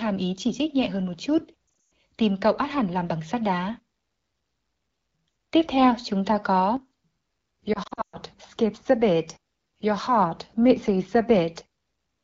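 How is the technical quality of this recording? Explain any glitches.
The speech has two glitches, both lost AMR speech frames, heard through an AMR wideband (HD Voice) link at 12.65 kbit/s.

From 1.67 to 1.91 s, and again from 7.73 to 8.17 s, radio errors corrupted frames, so the decoder stretched the last good pitch and vocal tract settings at falling gain. Gaps scattered over 240 and 400 ms, with runs up to 120 ms, sound like warbling, dipping speech that drops to near silence and returns weak for a moment. A plain dropout would instead cut to hard silence.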